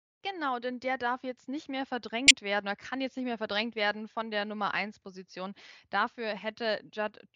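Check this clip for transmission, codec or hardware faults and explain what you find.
One codec fault turns up in this speech clip: a corrupt frame decoded, from 2.27 to 2.31 s, right after "darf jetzt nicht mehr" and before "werden oder kann jetzt". It sounds like a brief, harsh chirp-like burst, peaking near about -5 dBFS. Bit errors struck roughly a couple of compressed frames, and the decoder played them anyway. The garbled gains and codes put energy at the wrong frequencies for about 40 ms.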